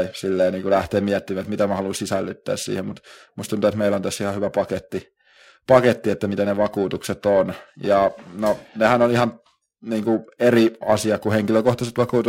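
Periodic clock jitter runs through the whole speech clip, from start to finish. The converter's sampling clock is being wobbled by interference at a steady rate of around 1 kHz, so each sample is taken slightly early or late in a repeating cycle. Every component of the speech picks up sidebands spaced about 1 kHz above and below it, and these are strongest on the higher frequencies. The result is a rough, metallic edge that rides on the speech and disappears in the pauses.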